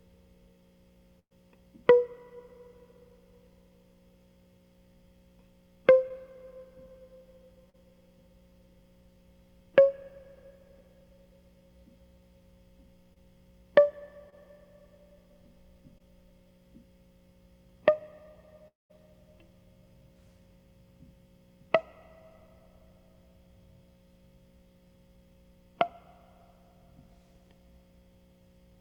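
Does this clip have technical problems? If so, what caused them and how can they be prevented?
Yes. Burst of packet loss at 1.19 to 1.33 s: a run of audio packets arrived too late or not at all, so the receiver stretched the last bit of music and faded it out, leaving about 80 ms of silence before the music picks up again with roughly 120 ms missing. A larger jitter buffer and forward error correction or redundant packets would prevent this.

Short concealed packet loss at 6.09 to 6.12 s, 7.70 to 7.76 s, 13.14 to 13.18 s, 14.30 to 14.34 s and 15.98 to 16.02 s: each time, 20 to 40 ms of audio failed to reach the decoder in time. The receiver patched the hole by extending the preceding sound and blending back in, which leaves a brief smear or wobble in the music. A steadier network path with less jitter, plus in-band error correction, would prevent this.

Long network dropout at 18.68 to 18.92 s: the music turns into a continuation of the last sound that fades away, followed by about 170 ms of silence, and about 220 ms of the music is gone when it returns. 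The likely cause is a stretch of time when the connection delivered no packets at all, so the receiver had nothing to play. A more reliable connection, such as a wired link instead of congested Wi-Fi, would prevent this.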